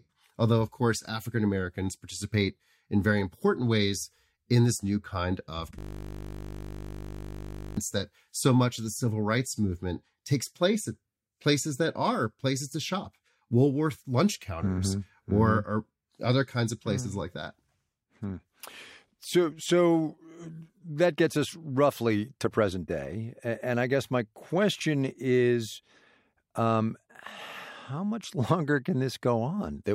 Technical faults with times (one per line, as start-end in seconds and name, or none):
5.79-7.77 system hang loop